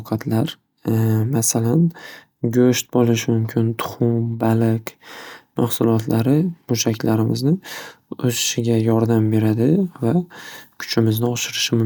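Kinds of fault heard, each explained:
Nothing stood out on listening to the speech in this clip.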